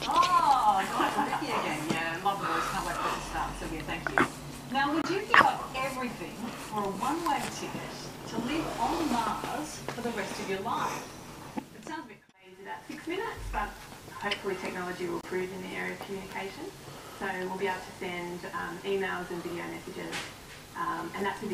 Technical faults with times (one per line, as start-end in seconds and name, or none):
5.02-5.06 Bluetooth dropout
15.21-15.25 Bluetooth dropout